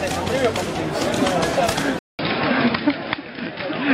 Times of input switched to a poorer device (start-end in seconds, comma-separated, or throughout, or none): 1.99-3.94